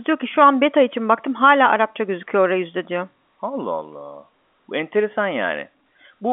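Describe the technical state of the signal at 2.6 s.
At 2.6 s the signal is intact, carrying only the narrow band of G.711 telephone coding with nothing above 3.7 kHz.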